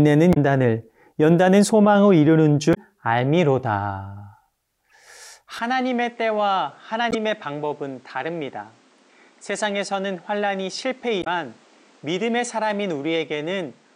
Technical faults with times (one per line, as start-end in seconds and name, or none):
0.30-0.37 damaged data in a compressed stream
2.71-2.77 damaged data in a compressed stream
4.90 damaged data in a compressed stream
5.59-13.96 input switched to a poorer device
7.11-7.15 damaged data in a compressed stream
11.19-11.27 damaged data in a compressed stream